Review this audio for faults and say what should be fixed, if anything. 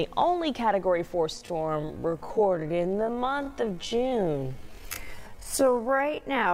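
Software likely stretched audio from 1.31 s onward to 0.52 times speed, repeating pieces to hold pitch, so this time-stretched section drags. To prevent it, fit the material to its slot by editing or re-recording rather than by stretching it to roughly twice its length.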